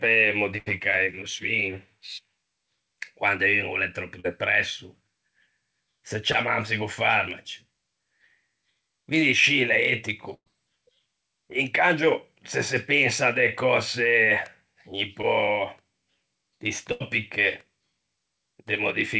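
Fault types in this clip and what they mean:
Burst of packet loss: A held buzz or fading hiss appears at 0.58, 10.34 and 16.92 s, then the speech picks up again with a piece gone: about 80 ms, 120 ms and 80 ms respectively. In the middle event the filler dies out into roughly 60 ms of silence. Several consecutive packets never arrived in time, so the receiver stretched the last sound and let it decay.
Short concealed packet loss: Brief smears or wobbles occur at 4.20, 6.32 and 15.22 s, each lasting only a moment. About 40 ms, 20 ms and 20 ms of audio went missing. The receiver patched each gap by continuing the preceding sound, pitched or noise-like, then blended back into the real signal. These holes are short enough to come across as a brief smear rather than an audible gap.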